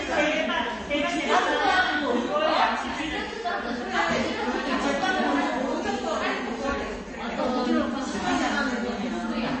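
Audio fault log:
Throughout, MP3 compression, likely: nothing is heard above 8.3 kHz, and the sound has a watery, swirling texture with sharp edges smeared. The encoder ran short of bits, so it removed the treble at a fixed point and dropped weak frequency lines that flicker in and out between frames. The damage is plainly audible and fits a bitrate around 32 kbps. A plain low-pass filter would dull the top but leave no swirl or flicker.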